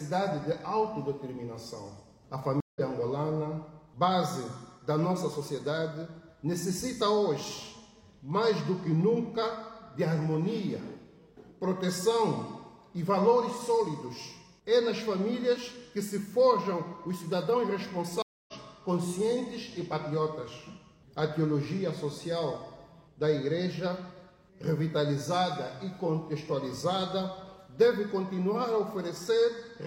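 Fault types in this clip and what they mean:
Stream reconnect at 2.60–2.80 s and 18.22–18.54 s: the connection dropped, the player fell silent for 153 ms and then 257 ms, and a fresh decoder picked the stream up further along, so roughly 0.2 s and 0.3 s of sound are skipped.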